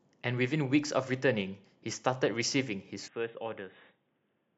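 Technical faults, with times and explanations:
3.08 s to the end, input likely switched to a poorer device: with no gap, the speech drops about 10 dB, turns dull with nothing above 3.8 kHz, and gains faint new noise.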